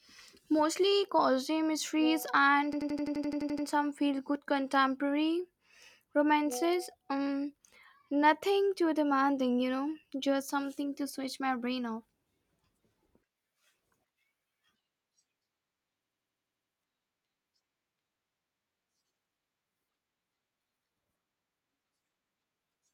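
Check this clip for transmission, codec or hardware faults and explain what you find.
The clip has one hardware fault, occurring twice. A system hang loop runs from 2.73 to 3.67 s and again from 16.04 to 16.73 s: the driver stalled while the sound hardware kept replaying one 85 ms ring buffer, which fits a 4096-sample buffer. The same fragment repeats 11 and then 8 times at 11.7 Hz, a machine-gun stutter in the speech.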